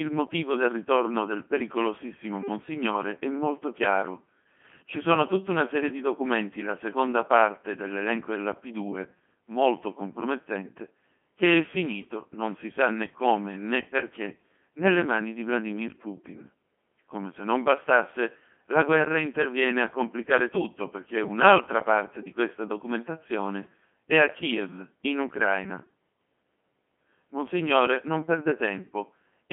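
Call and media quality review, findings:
Codec 2 vocoder, throughout. Speech is robotic and buzzy, with heavy damage and nothing above 3.6 kHz. The decoder rebuilds the voice from sine waves using only pitch, voicing, energy and envelope. Fits a 2.4 kbit/s mode.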